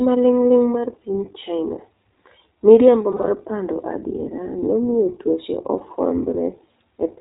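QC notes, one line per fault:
Throughout: iLBC codec. The sound is band-limited with nothing above 4 kHz, and has a plainly audible rough, slightly synthetic texture. That texture comes from each short frame's excitation being coded on its own. The coarseness points to the 15.2 kbps mode with 20 ms frames. On a spectrogram there is a hard ceiling at 4 kHz with empty space above it. Harmonics look smeared and grainy rather than cleanly striated.
3.12–3.30 s and 5.78–5.83 s: lost iLBC frames. In the first span, just before "pando adiera nomiyo tuoche", about 100 ms of audio is missing, scattered over 160 ms, with the longest run about 40 ms. The second is a single 20 ms gap just after "pando adiera nomiyo tuoche". The decoder fills each hole by repeating the last pitch cycle mixed with noise, so it sounds like a brief held, buzzy vowel. The spectrogram shows flat, repeated harmonics, and the waveform shows periodic repeats before normal audio snaps back.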